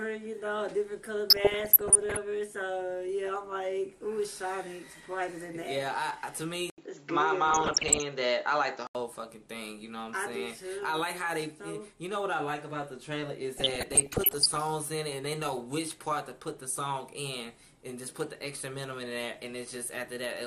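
MP2 compression runs throughout: the dull, gurgling, granular texture is likely from MPEG Layer II at a low rate, around 80 kbps, switching off upper sub-bands and coarsely quantising the rest.

DAB burbling appears from 1.3 to 2.17 s, 7.47 to 8.02 s and 13.57 to 14.57 s. Bit errors slipping past error correction corrupt samples and scale factors in the sub-band data, producing short blips of noise and sudden jumps in sub-band level.

An input switch to a poorer device occurs from 6.70 to 8.95 s. After an 80 ms silence, nothing is heard above 7.6 kHz, the level shifts by about 5 dB, and faint new noise sits well below the signal. This is likely a change to a narrower-band microphone or headset.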